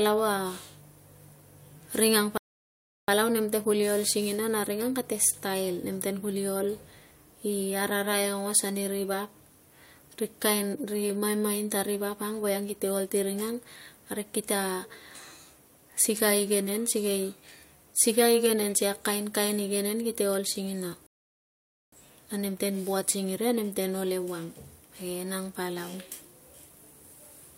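At 2.38 s, right after "ring ang", the speech drops into dead silence for about 0.71 s, then picks up cleanly with "nemte kuli ol singina" at 3.08 s. This is a rebuffering stall: playback ran dry and waited for more data. A second stall at 21.07 s holds for about 0.86 s before resuming at 21.93 s. On a waveform each appears as a flat gap; on a spectrogram, a blank vertical band. No audio is skipped; the clip simply runs longer.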